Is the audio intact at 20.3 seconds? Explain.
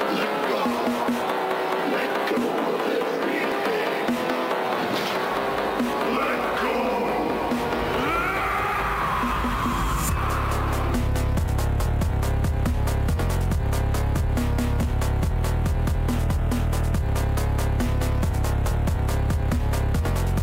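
Yes, the audio is intact at 20.3 seconds, with no dropout, click, distortion or other fault at that moment.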